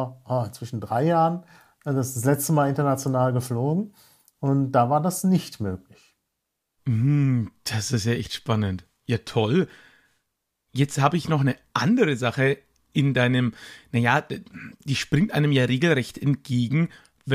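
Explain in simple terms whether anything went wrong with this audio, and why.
Nothing went wrong with this audio, and no technical fault can be heard anywhere in it. There is nothing here that needs explaining or fixing.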